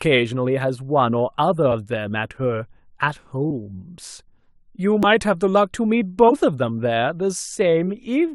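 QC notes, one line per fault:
3.43 to 6.35 s: compressed frames skipped, three times: at 3.43–3.51 s, at 5.03 s and at 6.24–6.35 s. The speech jumps forward each time, losing around 20 ms at the first spot and roughly 70 ms at the other two, so that stretch of audio simply vanishes. Whole coded frames are missing or were thrown out as damaged.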